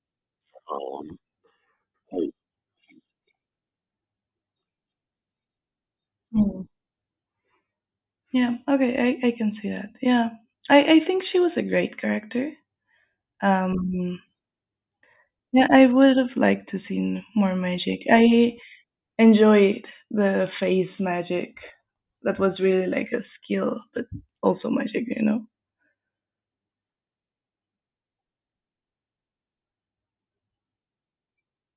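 No faults can be heard anywhere in the speech recording.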